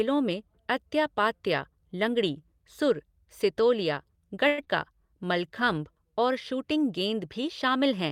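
Right after "पात्या लंगड़ी सुर सितोलिया", from 4.47 to 4.68 s, the sound smears into a fading buzz with no silent gap, then resumes with about 80 ms gone. This is likely a long network dropout, the receiver filling roughly 191 ms by extending the last sound, with the delay shifting by roughly 50 ms.

From 4.89 to 5.80 s, leading into "और शूटिंग गेंद", the speech drags at the same pitch, running at 93% speed. This is a jitter buffer slow-down: the receiver repeated pitch periods to add 69 ms, rebuilding its reserve.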